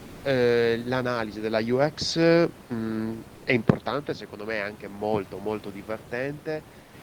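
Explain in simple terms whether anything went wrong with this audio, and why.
In three brief pauses, at 0 to 0.23 s, 3.35 to 3.45 s and 6.79 to 6.93 s, the real room background is swapped for smooth comfort noise, likely because the sender stopped transmitting while nobody spoke. Unlike a dropout, the pause never falls silent, and unlike the genuine room noise it sounds smoother.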